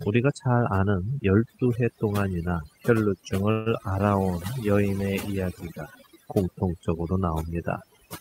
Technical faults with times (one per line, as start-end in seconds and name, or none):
0.00-8.20 overdone noise removal
3.51-3.68 call audio freeze